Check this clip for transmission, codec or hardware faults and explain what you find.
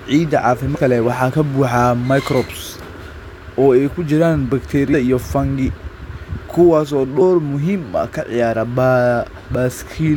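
The clip has compressed frames skipped, at 0.75 to 0.77 s and at 4.93, 7.20 and 9.50 s. Runs of whole 23.2 ms frames never play, so the speech jumps ahead about 150, 150, 100 and 70 ms, fitting several dropped frames. Overlapping neighbours leave a brief smeared blip, not a click.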